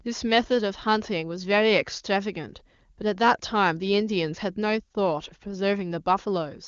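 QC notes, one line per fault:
Nothing stood out on listening to this speech, which comes through the AMR wideband (HD Voice) path with its content ending near 7.3 kHz.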